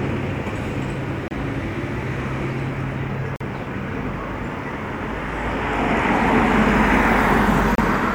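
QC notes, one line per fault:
1.28–1.31 s, 3.36–3.41 s, 7.75–7.79 s: Bluetooth dropout. The sound cuts to silence for about 29 ms, 44 ms and 29 ms, then resumes further on, as if it kept playing. This is likely a Bluetooth dropout: two or three audio packets reached the headphones too late and were discarded.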